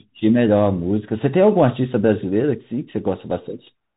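Throughout the speech, the Bluetooth CVSD headset codec leaves a granular hiss and scratchy s sounds, where loud highs outrun the one-bit delta's adapting step. This fits a 64 kbps CVSD link. A spectrogram shows a flat, empty ceiling above 3.8 kHz.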